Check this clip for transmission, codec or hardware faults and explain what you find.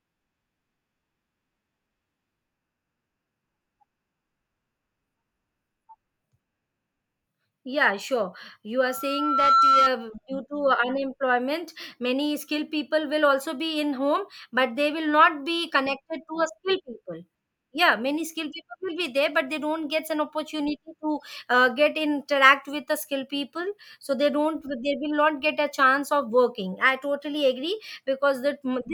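One fault is present: a loudspeaker feedback squeal from 8.79 to 9.91 s. The microphone hears its own loudspeaker, and at 1.4 kHz the loop gain passes one, so a pure tone swells over about three quarters of a second to roughly 10 dB above the speech. Unlike a steady interference whistle, it grows from nothing.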